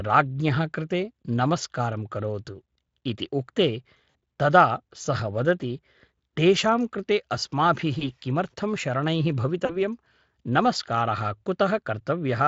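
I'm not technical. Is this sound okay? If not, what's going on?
No. There are three brief dropouts, caused by VoIP packet loss concealed by the speech codec. Bits of audio went missing in transit. The decoder filled each gap with a short, stretched sound that fades away.

The first is at 4.09 to 4.15 s, just after "इति उक्ते" and before "तदा सः वदति". About 60 ms was lost there.

The second is at 7.99 to 8.11 s, just before "किमर्थं शरणैः". About 20 ms was lost.

The third is at 9.65 to 9.82 s, just after "किमर्थं शरणैः". About 40 ms was lost.

After each gap, the speech stays weak or blurred for a moment.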